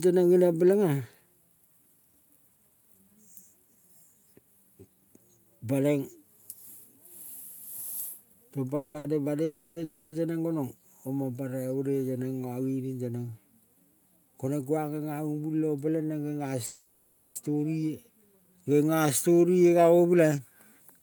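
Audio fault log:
8.75–8.96 s, 9.44–9.78 s, 9.84–10.14 s and 16.67–17.38 s: call audio freeze. The last sound is carried on as a fading buzz for 190, 320, 280 and 690 ms, likely because packets were held up and the jitter buffer ran dry. Playback then resumes where it stopped, just before "teneng gonong" for the third, so nothing is lost but each gap adds delay.
8.98–9.06 s: short stall from a late packet. A packet missed its slot and the receiver stretched the preceding sound by 60 ms until it turned up. That leaves a briefly held, slightly buzzy moment with no audio lost.
14.10–14.78 s: jitter buffer speed-up. With surplus audio queued, the receiver trimmed single pitch periods again and again, around 70 ms in total. The passage runs at 109% speed with unchanged pitch and sounds rushed.
18.54–19.83 s: jitter buffer slow-down. To rebuild its reserve, the receiver repeated pitch periods and bits of pauses, adding 148 ms. 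The sound runs at 89% speed with pitch intact, so it drags, with drawn-out sounds.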